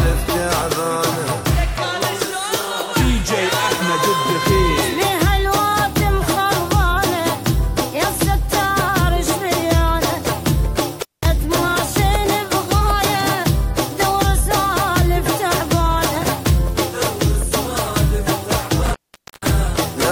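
At 11.00 s and 18.85 s, intermittent contact from a loose connection opens the line for about 200 ms and 490 ms, crackling at each edge unlike a clean digital dropout.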